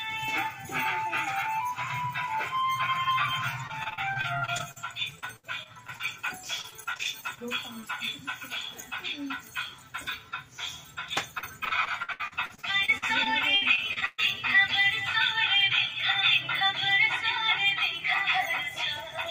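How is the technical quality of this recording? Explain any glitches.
The recording suffers from packet loss in three stretches and one brief dropout. Repeated packet loss (robotic sound) affects 3.67–6.01 s, 6.61–7.39 s and 11.38–14.20 s. Packets kept arriving late or not at all. Each gap was patched by extending the previous sound, making the audio choppy and robotic. The last stretch is worst, with about a quarter concealed and one gap of 125 ms. Short concealed packet loss occurs at 7.81–7.84 s. About 20 ms went missing and was filled from the preceding sound, leaving a brief smear or wobble.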